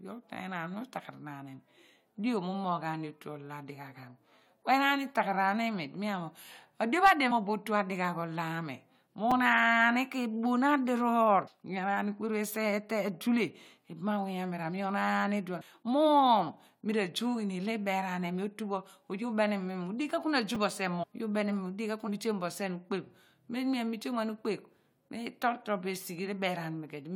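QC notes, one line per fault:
7.30, 11.46, 15.60, 21.02–21.04, 22.07 s: compressed frames skipped. The sound jumps ahead by roughly 0.15 to 0.3 s, whole 21.3 ms frames missing or rejected.
9.31, 20.55 s: repeated buffer. A tiny click-buzz where a 5 ms buffer plays again, once at 9.31 s and twice at 20.55 s, because fresh audio arrived late.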